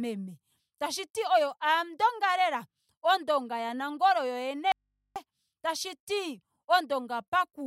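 At 4.72 s the speech cuts out abruptly for about 0.44 s, an audio dropout to a faint residue, until 5.16 s. The gap holds only mains hum far below the speech, likely from a live but disconnected input, not a natural pause or fade.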